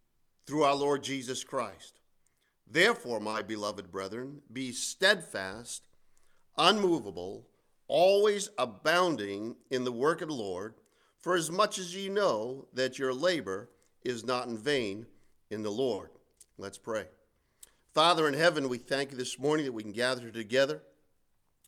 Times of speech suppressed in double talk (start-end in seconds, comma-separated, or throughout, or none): none